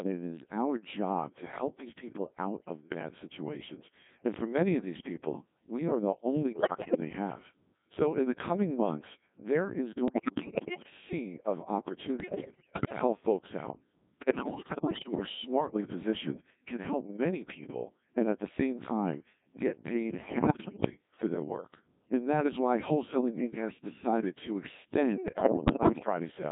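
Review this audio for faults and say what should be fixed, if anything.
The whole thing runs through a Codec 2 vocoder. The decoder rebuilds the speech from sine waves, so it sounds robotic and buzzy, which fits a 1.6 kbit/s mode squeezed into roughly 150 Hz to 3.7 kHz. To avoid it, use a higher-rate codec that keeps the waveform.

There are also bit errors on digital voice radio at 6.52–7.0 s, 10.08–10.9 s after "coming months there is", 12.2–13.01 s, 14.2–15.26 s, 20.24–20.9 s between "same time get paid" and "for their work", and 25.28–26.06 s after "has decided to extend". In each one the flipped bits scramble pitch and level, so it breaks into warbly gibberish, worst around 6.5 s and 12.2 s where the error rate sounds like about one bit in five. Better signal margin or stronger forward error correction would prevent it.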